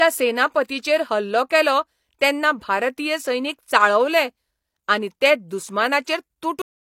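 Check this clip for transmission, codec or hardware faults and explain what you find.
Two faults stand out: a pre-echo near the start and a cut-off end.

At about 0.68 s there's pre-echo. A transform codec shares its quantisation noise across the whole block, so when a sharp onset lands late in a block, noise meant for the loud part leaks into the quiet just before it. Here that smear runs about 12 ms ahead of the attack. You hear a brief hiss leading into it, and the onset itself loses its edge and sounds a bit soft.

The clip also has a cut-off end at 6.62 s. The final stretch of buffers never got written out or played, so the speech just stops mid-sound rather than finishing. There's no natural decay at all, only an abrupt drop straight to digital silence that holds for the remaining third of a second or so.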